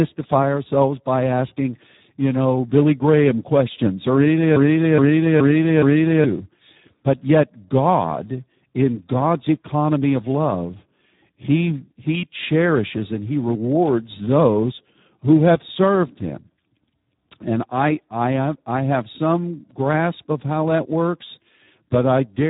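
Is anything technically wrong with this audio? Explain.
Yes. Speex codec damage runs through the whole speech clip. This CELP coder models the voice with a short-term filter and a coded excitation signal. At a setting consistent with about 8 kbps, the excitation gets very few bits, so the damage is heavy: the speech sounds hoarse and noisy. The band also stops at 3.8 kHz, leaving a muffled, telephone-like narrowband sound with no upper air.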